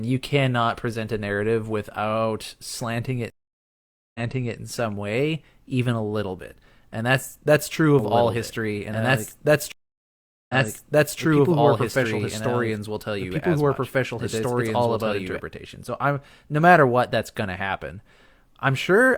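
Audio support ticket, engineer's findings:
Stream reconnect, 3.30–4.56 s. Dropout of 845 ms, then audio resumes 418 ms earlier than where it cut. Fresh decoder restarted mid-stream after connection loss. Server resent a burst, so material repeats.

Stream reconnect, 9.72–11.19 s. Second dropout, 773 ms of silence. Resumes 697 ms back. Same mechanism: link break, player reconnects, new decoder picks up from resent data.

Doubled audio track, 7.99–15.40 s. Full-band copy of the sound at equal level, about 2 s behind. No decay, no room colour. Starts and stops abruptly. Likely a second, slower capture path mixed in.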